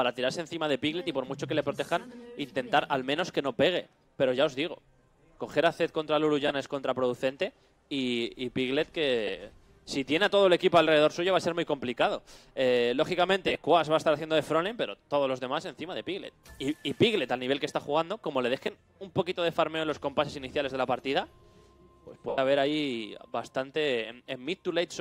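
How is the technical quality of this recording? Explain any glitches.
The recording has four brief dropouts, all of the same kind: lost LE Audio frames. The light lossy compression sits in the background and isn't part of these glitches.

The dropouts land at 6.48–6.51 s (about 22.5 ms), 9.27–9.30 s (15 ms), 13.47–13.55 s (about 37.5 ms lost in short bursts spread over 75 ms), and 22.29–22.38 s (90 ms). The missing chunks fit 7.5 ms Bluetooth frames. Each time a frame goes missing, the LC3 decoder fills the gap by replaying the last spectrum it had with its phases scrambled. That turns any tone into a brief noisy smear. The short gaps just blur. The 90 ms one at 22.3 s runs long enough for the concealment to fade, so you hear the sound wash out and sink toward silence.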